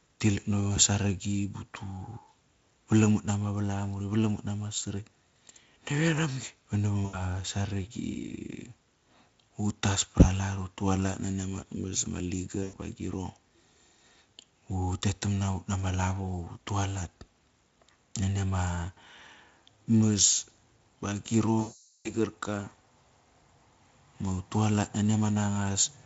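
VoIP packet loss concealed by the speech codec hits this speech recording at 7.05 to 7.17 s, 12.63 to 12.74 s and, most severely, 21.61 to 22.15 s. About 80 ms, 100 ms and 440 ms of audio were lost. The Speex decoder fills each gap by extending its last pitch and filter while lowering the gain, so the speech smears into a fading buzzy tone or coloured noise. After each gap the voice stays weak or distorted for tens of milliseconds or more once packets return.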